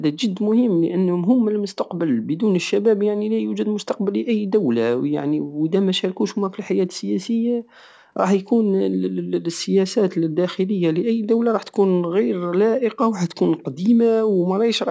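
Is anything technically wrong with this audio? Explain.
No, nothing's wrong here; it's just speech that went through a call's microphone processing, so the lowest bass is rolled off and there's nothing above 8 kHz, both of which are normal for that kind of path.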